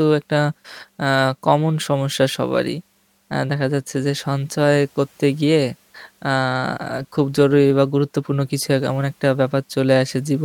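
No technical faults can be heard anywhere in the recording, which runs without any dropout, distortion or timing disturbance.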